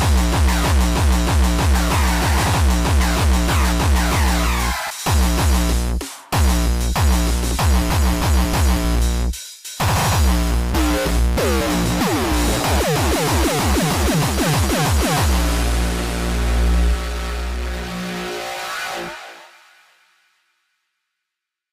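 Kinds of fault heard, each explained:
Sample clock jitter: an unsteady converter clock adds roughness roughly 20 dB below the sound which, unlike steady hiss, grows with waveform slope and vanishes in silence.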